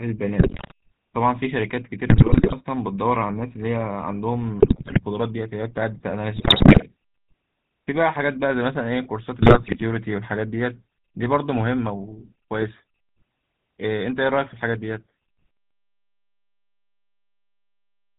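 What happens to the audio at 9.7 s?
Around 9.7 s the audio is inside a burst of GSM bit errors running from 9.40 to 9.83 s. Corrupted filter, pitch and gain values reach the decoder, so the speech breaks into squawks, pops and gargling. The waveform shows sudden level spikes, and the spectrogram shows smeared, misplaced formant bands frame by frame.

Throughout, including this moment, the GSM full-rate codec damage is plainly audible as a buzzy, gravelly roughness, which fits the 13 kbps full-rate coder. Its pulse-driven vocal-tract model leaves the spectrogram empty above 4 kHz, with coarse, regular harmonic striping below.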